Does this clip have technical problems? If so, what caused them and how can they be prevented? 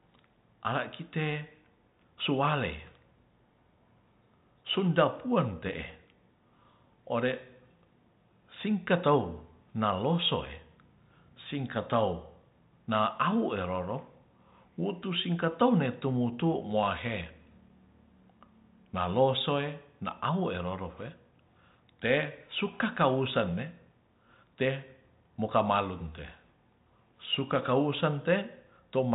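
No, the speech runs through a G.726 ADPCM telephone path at 40 kbit/s with nothing passing above 3.8 kHz, which is how that codec is designed to behave, and no technical problems can be heard.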